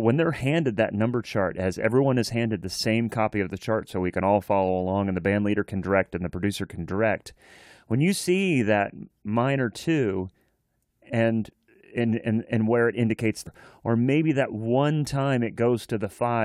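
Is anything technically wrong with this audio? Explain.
Yes. At 13.46 s, right after "and where it indicates", the speech jumps ahead with a small blip, likely a stream segment skipped after one segment failed to load.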